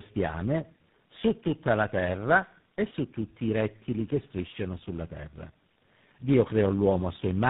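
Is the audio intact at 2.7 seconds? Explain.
No. Tandem speech coding affects 2.7 s as it does the whole clip. The speech went through three low-rate coders in a row, G.729A at 8 kbit/s, G.726 at 24 kbit/s and GSM full rate at 13 kbit/s, each re-encoding the previous coder's already damaged output, with G.711 links between them. The errors stack, so the speech sounds rough, muffled and warbly, and nothing is left above 3.8 kHz.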